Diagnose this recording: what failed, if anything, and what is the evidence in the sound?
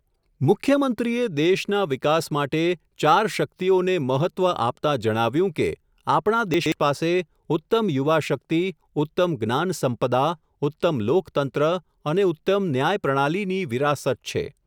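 The failure is chunks out of order at the driver or buffer stage. Between 6.54 and 6.72 s the speech jumbles briefly, with three hard joins. A 60 ms chunk was written late and plays two chunks after its proper place.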